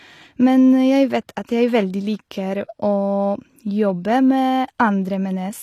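From start to end, the speech carries plainly audible codec damage, most likely from HE-AAC compression. Nothing reaches above about 14.9 kHz. The treble reaches higher than plain AAC would at this bitrate, but it is not the original. It has been rebuilt by spectral band replication, which copies lower bands upward under a coarse envelope. The copied harmonics do not line up with the real ones. S sounds turn gritty and lispy, with a metallic edge. This points to a low bitrate near 24 kbps.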